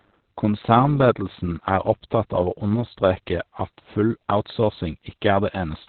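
The speech in this clip carries heavy Opus voice compression throughout: nothing remains above 4.2 kHz, which places it in the narrowband SILK mode, and the muffled, hoarse, faintly robotic texture points to a very low bitrate, around 8 kbps, with coarse excitation coding in 20 ms frames. A plain low-pass filter would dull the sound without this grainy, synthetic roughness. From 0.00 s to 3.31 s, ending just before "at full", an overlap-add ripple is also present. Frames were rejoined with overlaps that do not sum to a steady gain, so the level swings by about 6 dB at around 100 times a second. That is heard as a metallic buzz with extra tones around the voice. Unlike a musical tremolo, it is far too fast to be a deliberate effect.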